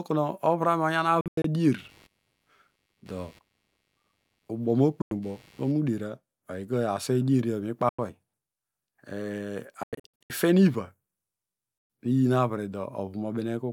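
A speech recording with repeated gaps that sound like Bluetooth dropouts, where audio packets likely failed to reach the headphones in time. The speech cuts to silence and resumes further on, as if it had kept playing underneath. The gaps fall at 1.21–1.45 s (several short holes totalling about 160 ms, the longest about 90 ms), at 5.02–5.11 s and 7.89–7.99 s (about 90 ms each), at 9.83–10.30 s (scattered holes totalling about 350 ms, ending just before "ifen iva"), and at 11.78–11.90 s (about 120 ms, just before "iyin avre"). On a waveform they show as flat stretches, and on a spectrogram as blank vertical columns cut through the speech. From 1.78 to 5.77 s there is also computer activity noise, a buzzy pulsing at around 100 Hz that sits roughly 35 dB below the speech and does not follow it. Load changes in the computer shift the ground shared with the audio circuit. On a spectrogram this noise appears as a faint comb of evenly spaced lines or regular vertical ticks that start and stop independently of the speech.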